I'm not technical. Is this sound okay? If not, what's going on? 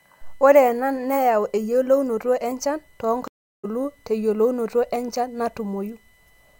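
No. There are two problems.

The first is a USB whine. A faint, steady, high whistle runs under the speech from start to finish. Its pitch is 1 kHz, and it is loudest at 2 kHz, one step up. It likely comes from a USB connection. The USB line does its work in bursts a thousand times a second, and that rhythm leaks into the audio through the power or ground wiring.

The second is a stream reconnect. At 3.28 seconds the sound stops dead. It stays silent for 0.36 seconds and comes back at 3.65 seconds. The connection dropped, and the player had to reconnect and start decoding again. When the speech returns, it has jumped ahead by a little under half a second. That part of the speech is missing for good, not just paused.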